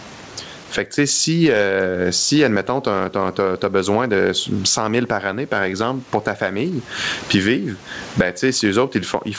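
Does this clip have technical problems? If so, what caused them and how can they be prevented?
Yes. Gain pumping runs through the whole clip, with a gain swing of about 25 dB. On a waveform, the gaps between phrases look raised, and peaks look flattened. The likely cause is microphone gain set far too high, with a fast limiter clamping it. Lowering the input gain and easing the limiter's attack and release prevents it.

Clock drift between sender and receiver is also present, with the sender's clock running roughly 3% slow. The receiver's jitter buffer keeps draining, so it has to pad the stream to keep playing. On a spectrogram, this shows as small discontinuities scattered unevenly along the time axis. Locking both ends to a common clock, or using adaptive resampling, prevents it.

Repeated timing corrections follow from that drift, from 0.04 s to 9.01 s. The receiver keeps repeating short pieces, stretching the sound to about 97% pace and adding roughly 300 ms overall. 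On the waveform, these appear as duplicated fragments at uneven spacing, heard, if at all, as slight hiccups. Smooth time-stretching in the jitter buffer avoids audible edits.

The room noise sits about 38 dB below the speech. The G.722 call path leaves nothing above 8 kHz, which shows as an empty band at the top of the spectrogram.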